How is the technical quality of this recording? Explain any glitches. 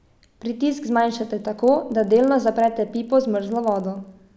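The recording has one clear fault. From 0.8 s to the end, the resampler restarted on every block. Each 40 ms block was converted from 48 kHz to 16 kHz with no view of its neighbours. That leaves a small error at every block edge. The result is a steady 25 Hz buzz that rides along with the speech.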